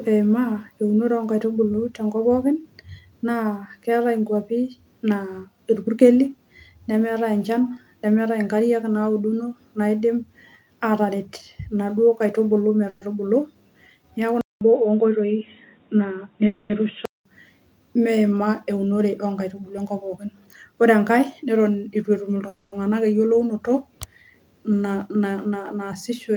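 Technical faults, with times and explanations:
12.89–13.03, 16.47–16.72 and 22.48–22.74 s: call audio freeze. The first comes just after "ataret inaduo kaitubulu". Each time the last sound is stretched into a fading buzz for 120, 230 and 240 ms. Nothing is lost. The audio resumes where it stopped, likely because packets arrived late and the buffer ran dry.
14.41–17.25 s: input switched to a poorer device. A 200 ms silence marks the switch. The sound then turns dull, with nothing above 3.8 kHz. A new noise floor sits about 45 dB below the signal, and the level stays roughly the same. A lower-quality input was likely swapped in.
15.78–16.18, 18.70–19.86 and 24.64–26.30 s: jitter buffer speed-up. The sound runs fast at unchanged pitch, at 114%, 108% and 105%. Tiny pitch-period slices are cut repeatedly, about 70, 100 and 100 ms in total, to shrink excess buffered delay.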